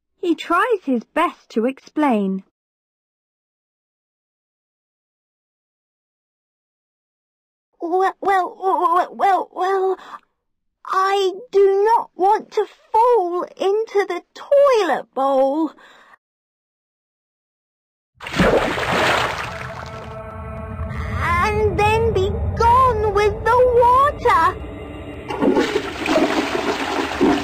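A scratch on the disc defeats the player's error correction once per revolution, so it patches or mutes the lost samples. That produces CD scratch ticks, about four a second: six from 19.77 to 21.11 s (longest around 5 ms), and seven briefer ones from 24.61 to 26.21 s.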